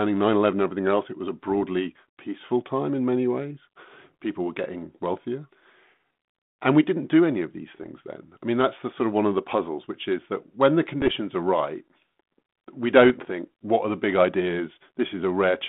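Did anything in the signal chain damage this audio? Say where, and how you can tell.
Yes, bit errors on the ADPCM link: rough pops at 1.48, 7.81, 11.02 and 13.04 s, each ringing on briefly as flipped bits upset the decoder's step size and predictor.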